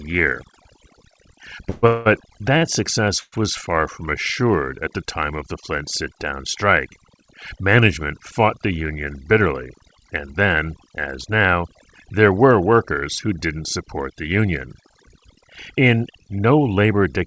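It's a speech clip that's come through a call path, with nothing above 8 kHz, which fits a G.722 wideband link. Overdone noise removal runs the whole way through: the background drops and breaks up into little twinkling specks, because quiet bands near the noise estimate get pulled down along with the noise. Around 1.70 to 1.85 s, 1.87 to 2.07 s and 3.21 to 3.34 s you get call audio freezes. The last sound is held as a fading buzz, and the third one dies into about 40 ms of silence before things pick up again with nothing lost. That's most likely packets held up on the way and the jitter buffer running dry. At 2.57 to 2.63 s there's a short stall from a late packet: one sound is stretched for about 37 ms with a faint buzz or dip, then the audio carries on from the same spot. Then comes the jitter buffer speed-up. From 9.32 to 10.41 s the speech runs at about 107% speed, and from 14.12 to 14.92 s at about 105%, with the pitch unchanged, as the buffer trims small pitch-period chunks to shed excess delay. 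That's roughly 70 ms gone in the first stretch and around 40 ms in the second, so both sound a bit hurried.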